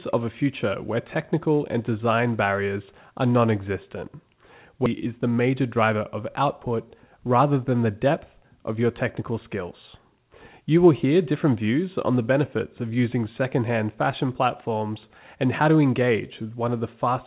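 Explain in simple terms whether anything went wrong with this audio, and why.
Two things went wrong, both on a phone-quality call line that carries nothing above 4 kHz.

At 4.86 to 4.88 s there is a skip ahead: about a second of audio vanishes and playback jumps straight on, with no silent gap like a dropout would leave.

From 5.46 to 6.02 s, a jitter buffer speed-up runs the speech about 9% faster by trimming tiny slivers. The pitch stays the same, unlike a sped-up recording.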